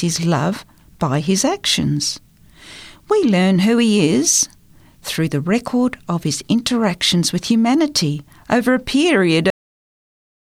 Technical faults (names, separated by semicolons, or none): cut-off end